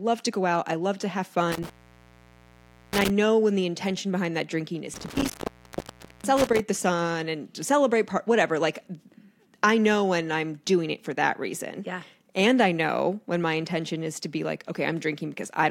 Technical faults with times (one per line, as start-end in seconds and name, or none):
1.52-3.10 intermittent contact
4.94-6.60 intermittent contact